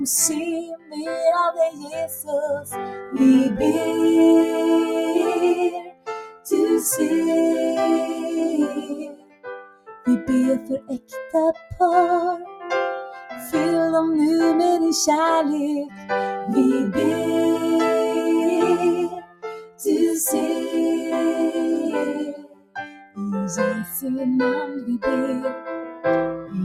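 A noise suppressor built for speech has been left running on this sound, and it treats steady tones, ambience and decaying tails as noise. Throughout, the level swings by around 10 dB as held material is pulled down while onsets pass, so the sound pumps and thins rather than staying even. Unlike a noise gate, it does not snap fully shut to silence. It keeps ducking in a frequency-dependent, fluttering way that follows how stationary the sound is.

Sound is also turned down further by the noise suppressor in six stretches: 0.6 to 3.16 s, 5.7 to 6.49 s, 8.78 to 13.4 s, 15.87 to 16.11 s, 19.11 to 19.85 s, and 22.3 to 26.54 s. Most of these sink by about 20 dB (about 19 dB in the first), but the brief one near 16 s drops only about 9 dB. What separates these from dropouts is that sudden attacks still come through while sustained parts and tails are shortened.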